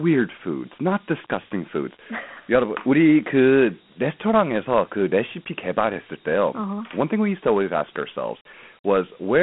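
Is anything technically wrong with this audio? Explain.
Yes. Throughout, the speech carries Dialogic VOX ADPCM damage: coarse 4-bit step-size coding leaves a gritty hiss that rises and falls with the speech, unlike steady line noise. Nothing sounds above 3.8 kHz, with a 150 Hz to 3.4 kHz telephone band, which fits 32 kbps coding.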